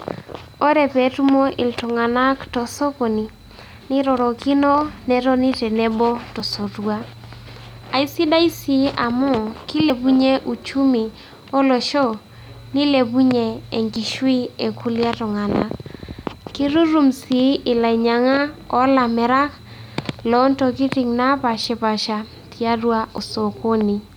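The speech jumps forward at 6.4, 9.9, 13.96, 17.36, 21.64 and 23.18 s, losing about 20 to 70 ms each time. This is likely a dropped buffer (overrun), where samples were overwritten before being read.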